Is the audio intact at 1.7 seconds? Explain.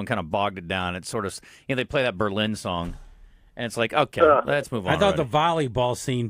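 Yes, the audio is intact at 1.7 seconds, with no dropout, click, distortion or other fault audible at that moment.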